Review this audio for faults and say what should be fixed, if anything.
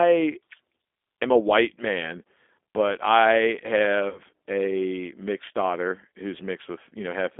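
The whole 7 s speech clip passed through a G.729 codec. The line is limited to roughly 250 Hz to 3.5 kHz, and the coding damage is plainly audible, consistent with an 8 kbit/s G.729A link. The decoder rebuilds the voice from a vocal tract filter, a pitch predictor and a few sparse pulses per frame, so the speech sounds thin, muffled and slightly rough and synthetic throughout. To prevent it, carry the call on a wideband codec at a higher bitrate instead of G.729.

From 4.09 to 4.20 s there is VoIP packet loss concealed by the speech codec. About 60 ms of audio went missing, which fits three consecutive 20 ms packets. The decoder filled the gap by repeating its last pitch and filter settings at falling gain, so the voice smears into a buzzy tone or coloured noise that fades. Because each frame builds on the one before, it stays weak and distorted for a short while after the audio resumes. 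To prevent it, reduce loss on the network path with QoS and a properly sized jitter buffer, or add forward error correction.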